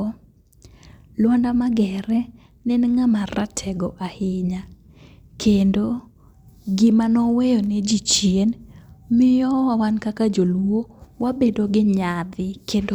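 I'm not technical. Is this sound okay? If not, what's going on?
Yes, you're fine here, since nothing in this recording sounds broken or out of place and there's nothing you need to worry about.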